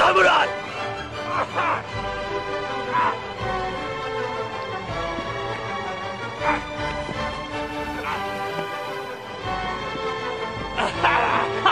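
A hybrid radio receiver lost its digital signal at about 7.51 s and fell back on the FM broadcast of the same station, returning to digital at about 9.41 s. This is digital radio blending to analogue. Each switch is a cross-fade of about 385 ms, and while the FM path carries the audio, the level sits about 2 dB lower and a layer of hiss comes up, roughly 30 dB below the programme.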